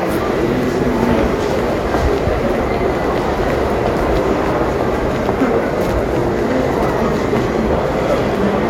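Nothing in these sounds stood out as a technical problem on listening.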